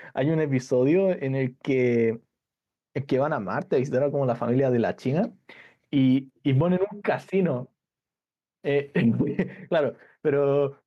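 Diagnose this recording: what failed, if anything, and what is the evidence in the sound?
Gain pumping throughout the speech: the gain swings around 10 dB, pulled down under loud syllables, likely input gain set far too high with a fast limiter clamping it.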